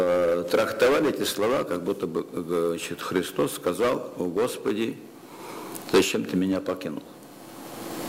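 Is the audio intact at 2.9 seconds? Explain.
No. From 0.6 s to the end, crude rate conversion repeats samples with no filtering, which fits a 44.1 kHz to 48 kHz change. This adds a gritty, inharmonic fizz roughly 25 dB below the sound that tracks loud and high passages.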